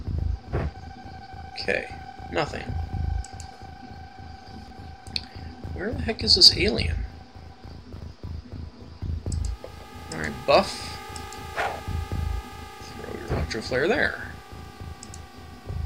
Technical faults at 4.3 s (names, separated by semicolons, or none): none